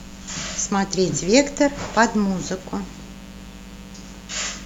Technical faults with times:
0.00-4.65 mains buzz

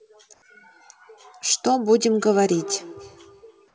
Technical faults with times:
0.34-0.42 comfort noise in place of the background
2.21-3.74 feedback echo between two devices

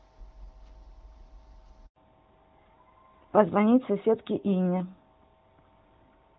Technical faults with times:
1.86-1.96 handover gap
1.96-6.39 fallback to narrowband

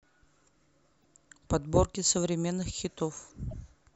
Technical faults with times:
1.01-1.05 damaged data in a compressed stream
3.49-3.53 damaged data in a compressed stream

